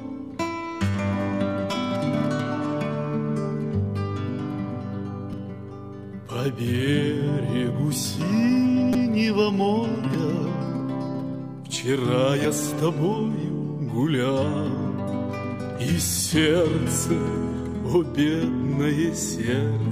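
Repeated buffer faults occur at 1.72, 5.33, 8.93–8.95, 10.14 and 12.44 s. Playback ran dry, so the last 5 ms chunk replayed one to four times. Each one is a click or brief buzz. The waveform shows identical cycles with hard joins, and the spectrogram shows a thin vertical streak.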